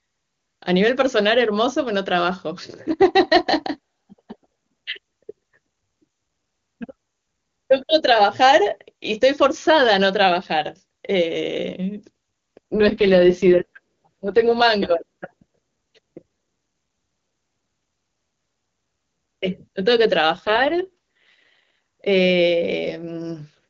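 AMR rate drop, from 12.74 to 14.62 s and again from 20.33 to 21.74 s. Each time, a weakening radio link makes the network push the AMR-WB codec down from its top mode to its lowest, trading speech bits for error protection. The bandwidth stays the same and nothing drops out, but the speech turns rough, buzzy and synthetic, which fits the lowest mode near 6.6 kbit/s. It returns to the clean HD Voice sound once the rate recovers.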